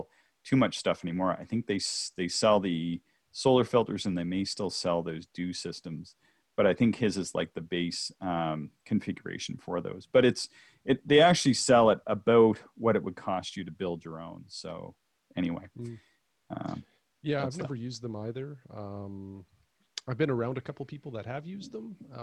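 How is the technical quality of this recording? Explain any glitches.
The technical quality of the recording is good, and there are no glitches to explain.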